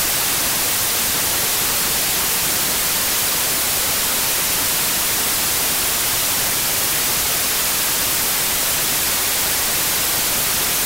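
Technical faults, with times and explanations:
Throughout, wrong sample width: the audio was stored as 16-bit integers but is being read as packed 24-bit integers. Each value the reader builds mixes bytes from neighbouring samples. Only some values keep the real signal's top bits. The result is loud, harsh noise with the original sound buried inside it. Three bytes are taken per value where two were meant, so playback runs 1.5 times fast, and pitch rises with it.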